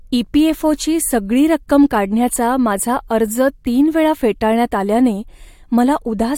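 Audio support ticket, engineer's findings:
No audible faults found.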